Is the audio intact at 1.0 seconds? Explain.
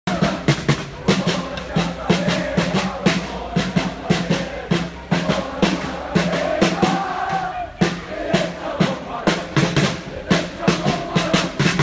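Yes, the audio at 1.0 seconds is intact, with no dropout, click, distortion or other fault at that moment.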